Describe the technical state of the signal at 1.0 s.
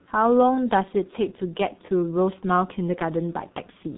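At 1.0 s you're hearing G.723.1 codec damage, and it runs through the whole clip. Nothing gets past about 3.8 kHz, and the slow, coarse 30 ms frame modelling leaves the speech muffled and hoarse with smeared consonants, which fits a bitrate around 6 kbit/s.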